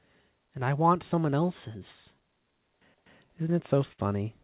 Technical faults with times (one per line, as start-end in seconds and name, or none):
0.00-4.44 clock drift between sender and receiver
0.01-3.75 repeated timing corrections
3.92-4.00 short stall from a late packet